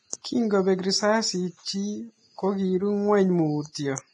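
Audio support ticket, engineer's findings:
Likely Vorbis compression at heavy damage, throughout. Encoder running at a low bitrate, consistent with roughly 27 kbps. Spectral floor kept, treble residue quantised very coarsely, so fine high-frequency detail is replaced by noise of similar energy. Speech sounds hissy and grainy, tones roughened, consonant attacks blurred. Hard band limit: nothing above 10.6 kHz.

Pre-echo, 3.72–3.75 s. Transform-codec block spreads quantisation noise sized for a loud onset back into the quiet stretch before it. Short hiss about 26 ms ahead of the attack, which lands soft and smeared instead of crisp.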